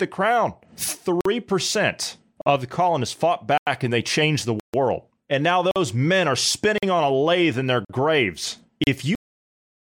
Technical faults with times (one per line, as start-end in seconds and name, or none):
1.21-1.25 block of digital silence
2.41-2.46 block of digital silence
3.58-3.67 block of digital silence
4.60-4.74 block of digital silence
5.71-5.76 block of digital silence
6.78-6.83 block of digital silence
7.85-7.89 block of digital silence
8.84-8.87 block of digital silence
9.15-9.91 cut-off end